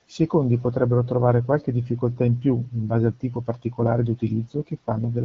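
No technical faults can be heard in this recording.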